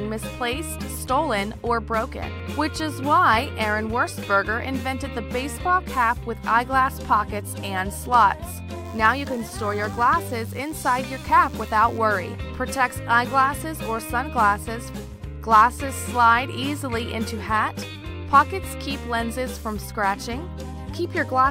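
From 8.85 to 11.98 s, the circuit rectifies nearby DECT radio bursts, producing DECT cordless phone buzz: a thin, harmonic-rich 100 Hz drone about 30 dB down.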